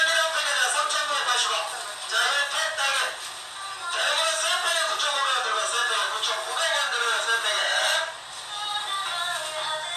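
No technical faults are audible anywhere in the recording.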